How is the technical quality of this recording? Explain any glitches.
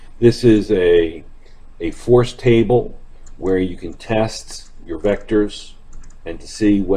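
The recording has one glitch, a single short burst of corruption.

A corrupt frame decoded at 3.52 s. Flipped bits in the compressed data for a couple of consecutive frames were not caught, and the decoder played them anyway. The misread gains and codes placed energy at frequencies that don't belong in the sound, and this lasted only for those damaged frames. The result is a brief, sharp blip or chirp that peaks at about -20 dBFS.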